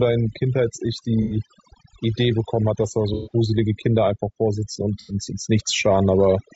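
Speech, heavily processed by overdone noise removal throughout: the background drops and breaks up into twinkling specks where single frequency bands are pulled down or gated whenever they approach the noise estimate, and quieter parts of the voice are cut with them. The whole clip also sounds rough and grainy, with noise filling the gaps between pitch harmonics and a synthetic-sounding top band. This is likely low-delay AAC compression (AAC-ELD), whose short frames resolve harmonics poorly and which here points to a low bitrate around 32 kbps. Three brief smeared, phasey patches mark AAC frame loss with concealment, where the decoder fills missing frames from the last good spectrum: 1.22–1.36 s and 5.00–5.14 s, each about 90 ms of lost audio, and 3.14–3.34 s, about 120 ms, the longest.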